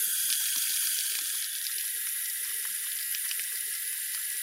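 Bluetooth stutter hits from 3.05 to 3.12 s: about 61 ms of the audio drops out as the receiver replays its last slice in a brief buzz, then resumes further on.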